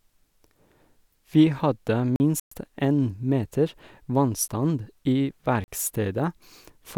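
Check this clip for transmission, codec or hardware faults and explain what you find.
Four faults interrupt the speech: three blocks of digital silence and one longer gap that points to a Bluetooth dropout.

Blocks of digital silence occur at 2.16–2.20 s (40 ms), at 4.48 s (10 ms) and at 5.64–5.68 s (40 ms). Samples were zeroed, probably because the buffer wasn't filled in time. The sound cuts out with no fade: the 40 ms blocks as short holes and the 10 ms one as a tick or dip. They show as a flat line on the waveform and a blank vertical stripe on the spectrogram.

A Bluetooth dropout at 2.40–2.52 s leaves about 116 ms of silence, likely caused by late packets dropped on the wireless link, consistent with roughly five lost packets. Speech resumes as though it had played on, and the gap shows as a wider empty band.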